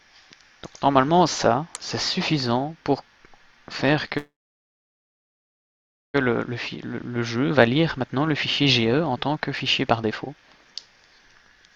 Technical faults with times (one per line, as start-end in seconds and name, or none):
4.17-6.16 call audio freeze
6.77-11.71 jitter buffer speed-up